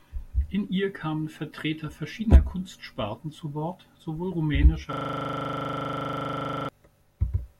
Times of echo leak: none

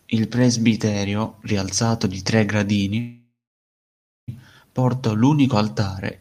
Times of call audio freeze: 2.99-4.30

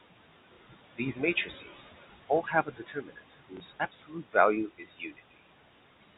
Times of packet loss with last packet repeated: 0.54-0.57, 3.57-3.60

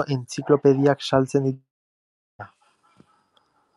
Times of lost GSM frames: none

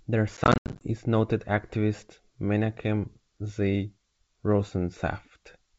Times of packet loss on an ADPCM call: 0.37-0.88

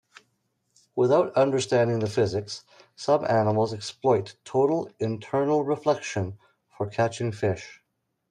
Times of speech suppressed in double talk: none

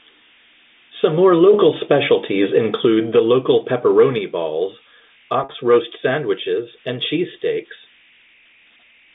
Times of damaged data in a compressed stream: none

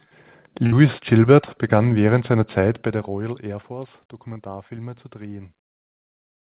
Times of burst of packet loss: 0.66-0.74

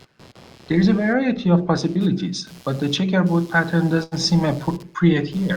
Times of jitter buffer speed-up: none

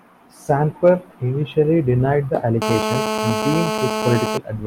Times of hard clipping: 0.86-0.90

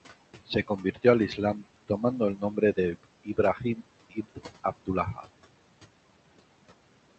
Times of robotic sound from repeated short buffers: none

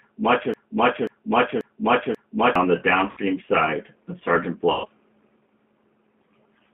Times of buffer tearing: none

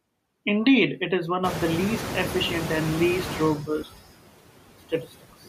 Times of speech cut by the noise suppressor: 3.58-3.98, 4.79-5.48

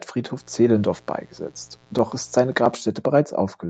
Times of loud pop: none

